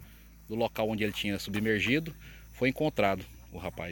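No technical faults are audible.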